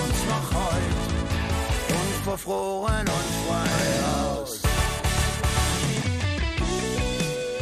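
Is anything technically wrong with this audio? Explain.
Yes. From 3.72 to 6.02 s there is a doubled audio track: a second copy, equally loud and roughly 150 ms late, likely from a slower capture path. Unlike an echo or reverb, it has no decay or room colour and starts and stops abruptly.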